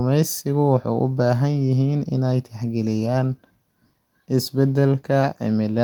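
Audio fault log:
No faults are heard anywhere in this speech clip. The Opus voice compression shows only light damage, and the band reaches up to about 20.1 kHz, consistent with fullband hybrid coding at around 24 kbps.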